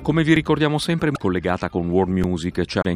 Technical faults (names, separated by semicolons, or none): underrun with held sample; damaged data in a compressed stream